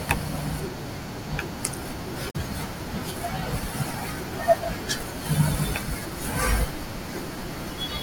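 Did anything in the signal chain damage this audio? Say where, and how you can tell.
Yes. The damage is at the codec stage: damaged data in a compressed stream. From 2.27 to 2.36 s, a brief glitch cuts through the speech. Corrupted bytes made the decoder misread those frames and lose sync until it found the next valid frame header.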